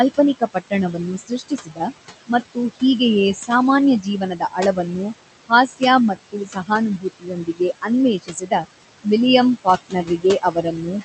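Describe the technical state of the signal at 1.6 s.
At 1.6 s the sound falls inside a stretch of speech cut by the noise suppressor, running from 0.17 to 1.88 s. The suppressor mistakes parts of the speech for noise and pulls them down, by about 18 dB at the deepest. Soft consonants and word endings sound swallowed, adding up to roughly 0.7 s of the span.

Noise suppressor artifacts are also present here, as across the whole clip. The suppressor lowers the bands it judges to be steady noise, by about 17 dB. The room noise dips in gaps and returns under the speech.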